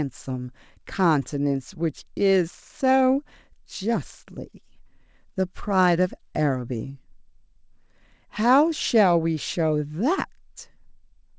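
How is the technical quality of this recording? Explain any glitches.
The technical quality of this recording is sound, with no glitches to explain beyond the ordinary band limit of a G.722 call path, which leaves nothing above 8 kHz.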